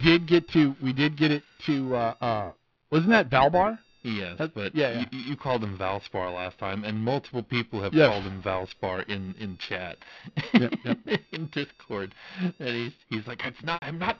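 Right from the start and all the way through, there's periodic clock jitter on this speech. Something is wobbling the converter's sample clock at a steady rate, somewhere around 1 kHz, so every component of the voice picks up twin sidebands spaced that far above and below it. The higher frequencies get hit hardest, which is why there's a gritty, metallic edge riding on the speech. It drops away whenever the speech pauses.

Near the very end, from 13.74 to 13.82 s, you get packet loss with pitch repetition. About 80 ms of audio went missing, which fits roughly four 20 ms packets, and the decoder covered it by looping the last pitch period it had. The repeated period fades out over about 50 ms, so on this gap the held, buzzy sound dies away into silence before the speech picks back up with a short cross-fade. All of it sits inside the narrow telephone band of the G.711 coding.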